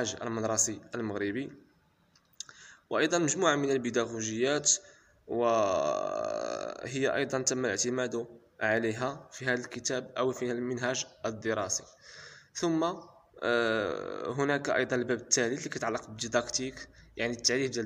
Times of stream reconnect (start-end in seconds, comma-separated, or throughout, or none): none